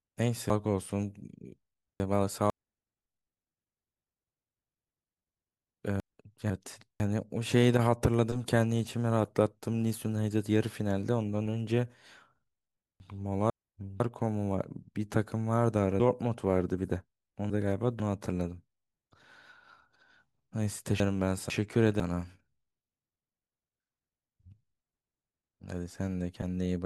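Five spots of chunks out of order turn up in this speech, all built from half-second chunks. At 0.5–2.5 s and again at 16.0–18.0 s, a chunk lands three chunks late, so a second and a half of later audio plays before it drops back in. At 6.0–7.0 s, 13.0–14.0 s and 21.0–22.0 s it's just one chunk late, basically two neighbours swapped. Nothing goes missing, but each spot sounds jumbled, with three hard joins.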